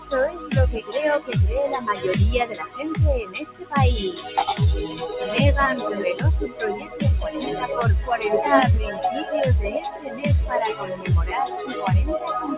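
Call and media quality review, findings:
Noise suppressor applied to music or sounds: level pumps and flutters across the whole clip, with swings of about 10 dB. Held tones and tails sink while attacks pass. Probable component: a speech-tuned suppressor left active, treating steady content as noise.

Sound cut by the noise suppressor: sustained or decaying sound ducks at 0.31, 2.53, 3.24, 6.78, 9.88, 10.74 and 11.55 s. Dips last 0.15–0.4 s, with the deepest about 14 dB at 3.24 s. Same suppressor clamps gain on steady energy.

Band stops at 4 kHz, consistent with a G.711 mu-law call leg.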